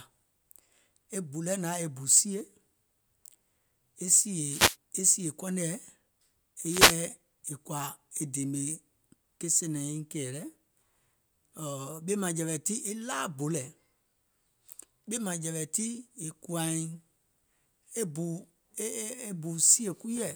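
A speech clip with two short bursts of static swishing over the voice, at 4.49 to 4.76 s, just before "e sìè", and at 6.67 to 6.98 s. These are wireless microphone noise hits: the FM radio link faded as reflections cancelled, letting receiver noise surge up and mask the signal.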